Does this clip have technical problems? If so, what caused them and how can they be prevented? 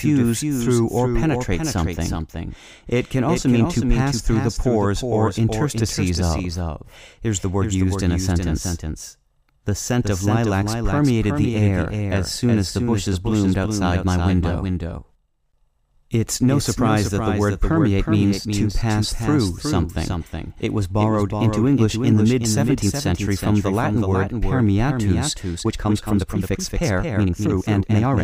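Yes. A doubled audio track runs through the whole clip, likely because the speech was picked up a second time by a slower path and mixed back in. A full-band copy trails about 400 ms behind, roughly 5 dB quieter, with no decay or room colour. Prevent this by making sure each source reaches the mix through only one route.

A time-stretched section covers 25.50 s to the end at 28.23 s, likely where software squeezed the audio to fit a length by dropping short pieces. The pace jumps abruptly to 1.64 times normal speed while pitch holds, so the speech sounds rushed. Prevent this by trimming or re-editing material instead of compressing it to fit a slot.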